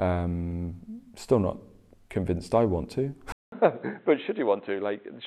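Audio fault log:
3.32–5.26 s, input switched to a poorer device: after a 200 ms silence the speech turns dull and boxy, with nothing above 4 kHz, a drop of around 10 dB, and a new, faint noise floor, likely from recording switching to a narrower-band microphone or headset profile.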